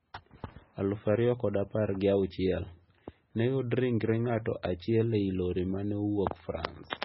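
MP3 compression runs throughout the speech, likely the cause of the heavy damage heard: nothing survives above 5.6 kHz, and weak frequency lines flicker on and off between frames, giving a watery, swirling texture and smeared attacks, which fits a 16 kbps stream.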